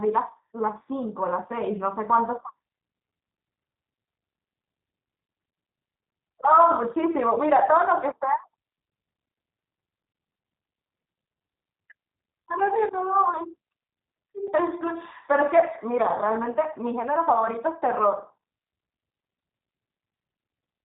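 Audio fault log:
throughout, G.729 codec: The speech is plainly rough and synthetic, with nothing above 3.8 kHz. The coder rebuilds each short frame from a vocal tract filter, a pitch predictor and a handful of pulses. A plain low-pass filter would only dull the sound, but here there is also a coarse, artificial texture that fits an 8 kbit/s G.729A-type coder.
14.47 s, gap between chunks: A hole of about 6.5 ms cuts into the sound, and the audio resumes exactly where it stopped. A join between separately sent or stored blocks was padded with silence rather than played straight through, and the timing fits 5 s chunks. A dropout would lose material and a click would add energy; this gap only inserts a brief, clean stretch of silence.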